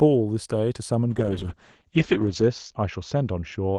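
A call bitrate drop starts at 1.1 s and runs to the end. The encoder is starved of bits, so the speech turns coarse and watery as its top end narrows from 12 kHz to 8 kHz, consistent with 32 falling to 8 kbps. The roughest stretch lasts 1.35 s.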